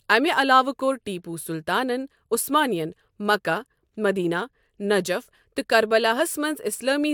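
At 3.92 s, an overlap between stream segments occurs. Two 4-second segments claimed the same stretch of time, so the player trimmed about 17 ms of speech that existed only once. The waveform jumps across the gap, heard as a brief click or skip.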